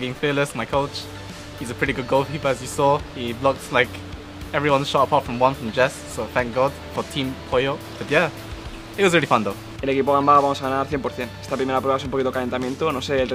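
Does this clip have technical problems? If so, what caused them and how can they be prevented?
No, nothing here sounds wrong, so there's no fault to trace back or guard against next time.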